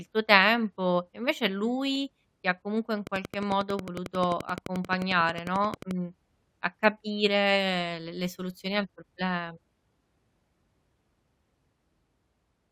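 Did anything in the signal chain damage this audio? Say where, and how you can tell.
Yes. A train of clicks runs from 3.07 to 5.92 s, just after "ti ha comunque in": regular ticks at 11.3 per second, about thirty in all, peaking about 10 dB above the speech. This is likely interference coupled into the analogue wiring. The spectrogram shows evenly spaced vertical broadband lines, and the waveform shows matching spikes.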